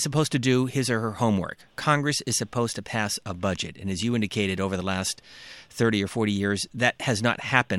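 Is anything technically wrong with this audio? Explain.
No, nothing technically wrong can be heard in this speech.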